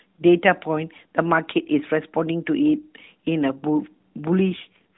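Speech carried over an AMR narrowband mobile codec, band-limited below 4 kHz with light coding roughness, suffers an AMR rate drop from 4.50 s to the end at 4.97 s. The voice turns buzzier and more synthetic, which fits the link falling from 12.2 to 4.75 kbps to spend bits on error protection. Unlike packet loss there is no gap, and unlike a bandwidth switch the audible band stays the same; only the texture coarsens.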